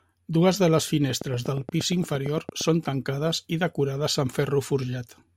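A speech clip with a train of clicks from 1.10 s to 2.62 s. It begins right after "de les" and stops before "són tancades i decorades". The clicks are evenly spaced at about 8.6 per second, roughly fifteen in all. Each has much the same shape, and they peak around 5 dB above the speech. The regular pulse pattern likely comes from electrical interference or a faulty connection or power supply injecting repeated spikes into the signal.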